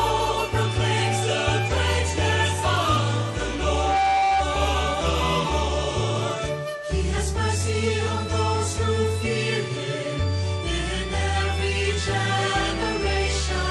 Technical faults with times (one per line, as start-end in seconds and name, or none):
0.00-13.70 MP3 compression
3.64-4.53 loudspeaker feedback squeal
7.17 compressed frames skipped